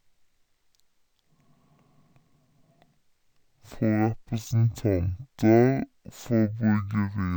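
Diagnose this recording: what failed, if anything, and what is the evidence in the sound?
Stereo read as mono, a sample-format conversion fault: the speech crawls at half speed and a full octave low throughout, because interleaved left-right samples are being played as one channel.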